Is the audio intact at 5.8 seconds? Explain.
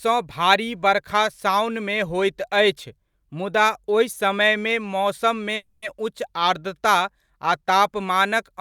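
No, there's a call audio freeze from 5.55 to 5.84 s, right after "समयमे मौसममे": the last sound stretches into a fading buzz, likely jitter-buffer starvation. Nothing's lost; "उच्च आर्द्रता" just arrives about 270 ms late.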